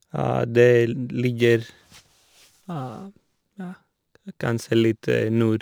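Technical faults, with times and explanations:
1.25 to 5.62 s, crude rate conversion: samples dropped without filtering, consistent with a 48 kHz to 44.1 kHz change, leave an inharmonic fizz roughly 30 dB below the speech.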